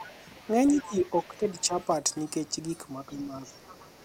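An echo canceller that likely failed to remove the far-end loudspeaker signal lets the other side's voice leak through. It is audible from 0.00 to 0.19 s at about 15 dB below the talker, and again from 0.68 to 1.28 s at about 20 dB down. Within that stretch, from 0.75 to 1.03 s, speech is suppressed in double talk. The canceller likely mistook the talker for echo while both spoke, so the voice dips by roughly 10 dB for about a sixth of a second. The same suppression returns from 1.28 to 1.77 s, thinning the voice for around a third of a second. A faint leak, about 30 dB down, overlaps it from 1.56 to 1.84 s. From 3.08 to 3.64 s the talker is again pushed down by roughly 10 dB for about half a second. The other side's voice leaks through once more from 3.44 s to the end of the clip, about 25 dB below the speech.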